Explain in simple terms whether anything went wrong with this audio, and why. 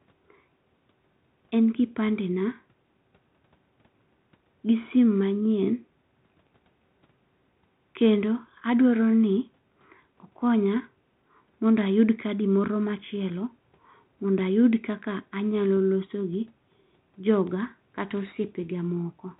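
Nothing went wrong here; the speech comes through as expected.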